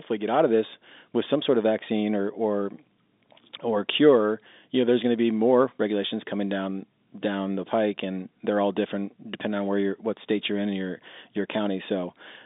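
Nothing stood out on listening to this telephone-band speech recording.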